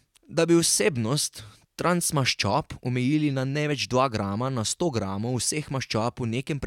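No technical faults are audible in this speech.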